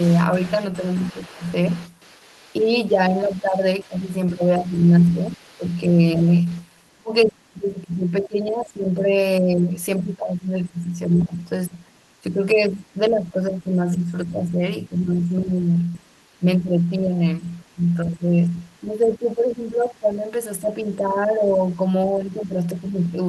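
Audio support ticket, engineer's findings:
Other side's voice leaking through at 0.0–3.84 s, 4.75–6.62 s, 15.85–16.39 s and 17.43–18.57 s. Faint, about 25 dB under the talker at first, fading to about 40 dB below. Likely the echo canceller missed some loudspeaker pickup. Spectrogram shows a weak second harmonic stack beneath the main speech.

Speech suppressed in double talk from 0.77 s to the end. Talker level dips, deepest drop around 15 dB. Likely the echo canceller turns down the talker along with the loudspeaker echo when both talk at once. Waveform shows the envelope pulled down in patches.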